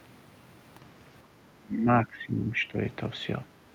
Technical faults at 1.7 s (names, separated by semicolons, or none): speech suppressed in double talk